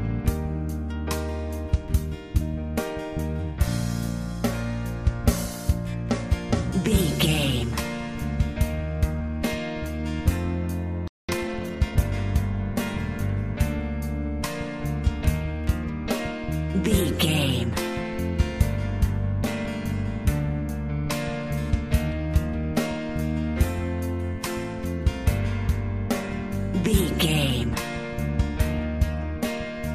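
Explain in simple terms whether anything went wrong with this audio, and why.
At 11.08 s the sound stops dead for 210 ms, until 11.29 s. This playback stall likely happened because the player briefly ran out of data. From 11.29 to 12.13 s, the audio plays 1.25 times too fast but keeps its normal pitch. This is time-compressed catch-up. The player trims tiny pieces to get back on schedule.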